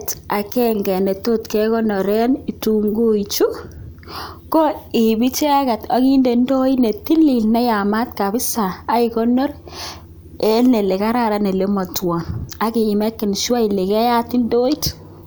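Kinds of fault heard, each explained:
No technical faults detected.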